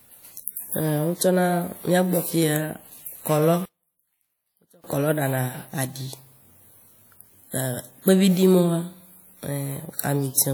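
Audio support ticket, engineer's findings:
Speech drops by about 32 dB from 3.65 to 4.84 s, recovering just before "kɔlɔ ɖana aɖi". Likely one channel inverted upstream of the mono fold-down. Reversed polarity on one side cancels the shared content when summed, background included. Only the small left/right mismatch remains audible. Check channel wiring and polarity settings in the stereo path.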